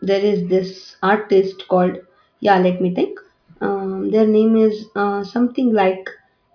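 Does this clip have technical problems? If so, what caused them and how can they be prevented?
No, no technical faults here.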